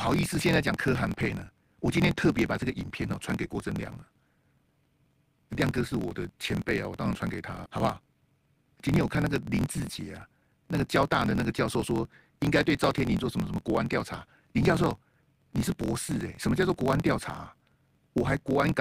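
Throughout the speech, a block size mismatch (truncated) discards the end of each block, which fits a 1024-sample read. This leaves a steady 43.1 Hz buzz and runs everything 1.12 times fast at normal pitch, unlike a resampling error. At 7.66 s, a skip ahead jumps past roughly a second of speech with no gap or fill, so the two sides butt together rather than leaving the silence a dropout would. From 7.80 to 8.53 s, a jitter buffer speed-up trims pitch-period slices to cut the backlog, running at 110% and removing about a tenth of a second. The pitch holds, as with the truncation, but there is no buzz and it lasts only this stretch.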